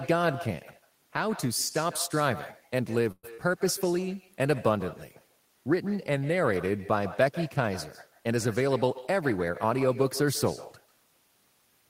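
Throughout the clip there is echo with no canceller: the far end's loudspeaker feeds its microphone, returning each phrase roughly 150 ms later, about 16 dB down and thin. From 3.11 to 3.25 s a call audio freeze holds the last sound as a fading buzz or hiss, ending in about 30 ms of silence, likely after held-up packets emptied the jitter buffer, adding 119 ms of delay. At 3.34 to 3.49 s short concealed packet loss leaves a brief smear: 35 ms is synthesised from the preceding sound, while 40 ms is simply dropped. From 8.61 to 9.95 s a jitter buffer speed-up trims pitch-period slices, removing roughly 150 ms, so the speech runs at 109% with unchanged pitch and sounds hurried.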